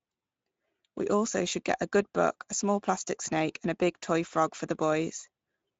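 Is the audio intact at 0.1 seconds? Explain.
No. Speex codec damage runs through the whole clip, including 0.1 s. Few bits for the excitation make the speech hoarse and noisy. Nothing sounds above 7.7 kHz. The sound fits about 17 kbps.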